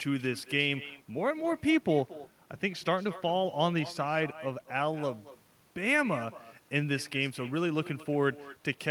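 Throughout the speech, every phrase is trailed about a fifth of a second later by a quieter, thinner copy, about 17 dB down. This is echo with no canceller: the far end's loudspeaker feeds its microphone, and nothing strips that returning signal out.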